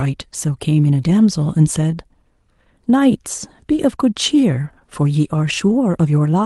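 Clock drift between sender and receiver runs through the whole speech clip. The sender's clock is about one and a half percent slow, so the jitter buffer keeps draining. From 0.04 s to 5.74 s come repeated timing corrections. The receiver repeats short pieces, playing at 98 percent speed and adding about a tenth of a second. They sound like slight, unevenly spaced hiccups and a dragging tempo. The Opus call path, limited to 12 kHz, plays through them.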